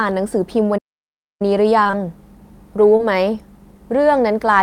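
A short speech clip with two kinds of fault. From 0.77 s to 1.42 s the sound stops dead in mid-flow for about 0.62 s and then carries on, a playback stall, most likely because the player ran out of buffered data or its thread was blocked. What separates it from packet loss is true silence: nothing fills the gap. The second fault is short concealed packet loss. Three back-to-back 20 ms losses run from 1.83 s to 1.95 s, and a single one falls at 2.97 to 3.01 s. In each, the decoder patched the hole by extending the preceding sound, as a pitched continuation or shaped noise, before blending back. These gaps are never silent. They come across as a brief smear or wobble, so the fill itself, rather than a pause, is the giveaway.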